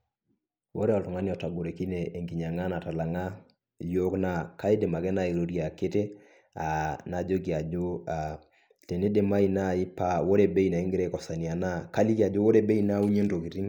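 Nothing in this recording trips any alarm: no dropout, glitch or distortion turns up at any point, so there's no fault to describe.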